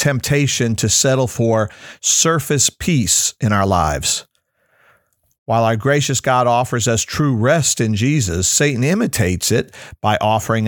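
No glitches, dropouts or other technical faults turn up anywhere in this speech recording, so there's nothing to flag.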